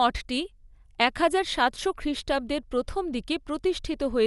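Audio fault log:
Throughout, likely Dolby Digital compression: speech stops dead at 11.4 kHz and sounds dull, with rough fluttery noise filling the starved bands, which fits roughly 64 kbps.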